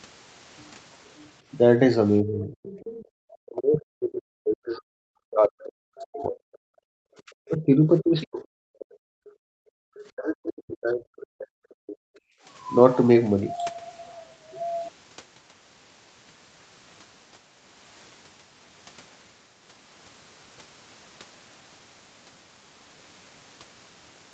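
From 2.21 to 4.91 s the speech dips hard, falling by roughly 40 dB at its lowest. Likely cause: speech suppressed in double talk. Both ends talked together, and the echo canceller turned everything down. Inside that span, from 2.63 to 3.05 s, a faint second voice sits about 20 dB under the speech, most likely the other side's voice leaking through after the canceller failed to remove the loudspeaker sound. The same double-talk suppression returns at 5.24 to 6.8 s and 7.27 to 9.03 s. A brief leak of the other side comes at 8.22 s, inside that span, about 25 dB down. From 9.31 to 9.84 s the room sound drops by about 40 dB. This is background gated by the echo canceller, which clamped the microphone while the loudspeaker played. Another short leak comes at 9.94 s. A final double-talk suppression runs from 10.12 to 12.13 s.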